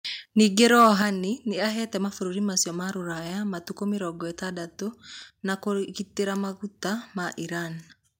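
The microphone's input level was likely set too high, so from 0.63 to 0.88 s the loudest peaks of the speech ran into the converter's ceiling, overshooting it by about 3 dB. This is microphone overload: the tops of the waveform are sliced flat across a small share of samples, and the clipped peaks take on a harsh, crackly edge that briefly roughens the loudest syllables in that quarter-second.

At 1.02 s the call software likely reacted to that distorted burst by cutting the device's input gain in a single step, a microphone volume stepped down by about 6 dB. Because the change is applied to the whole input rather than to the speech alone, voice and background both drop together at once, and the level stays noticeably lower from that moment instead of easing down.

Between 4.19 and 5.22 s a damaged spot on the disc destroyed more data than error correction could rebuild, once per revolution, and the player patched over the lost samples. 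These CD scratch ticks come as five short clicks spread across that second, roughly five per second, each lasting no more than a couple of milliseconds. They sound like small, evenly spaced snaps or momentary gaps laid over the speech.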